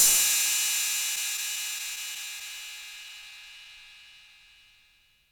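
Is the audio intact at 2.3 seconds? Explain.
No. From 1.15 to 2.43 s there are scattered short gaps: around seven tiny packet losses, each about 10 ms or less, patched by extending the preceding sound. Unlike one long dropout, they leave brief ticks and smears rather than a silent hole.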